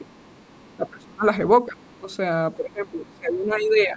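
From 0.00 to 0.11 s both sides talk at once, and the echo canceller likely cannot separate the talker from loudspeaker echo, so it turns both down. This is speech suppressed in double talk: the voice dips by roughly 15 dB.

From 0.08 to 0.74 s the canceller likely leaves some of the loudspeaker signal in the microphone. The other side's voice leaks through faintly, roughly 35 dB below the talker.

The suppression returns at 0.74–1.26 s with its deepest cut, about 25 dB. It comes back briefly at 1.67–1.79 s and 2.00–2.11 s, about 10 dB each time, with leakage between them at 1.80–1.98 s. From 2.56 s to the end the voice is held down, by up to about 20 dB. A last scrap of the other side slips through at 3.11–3.18 s, about 40 dB down.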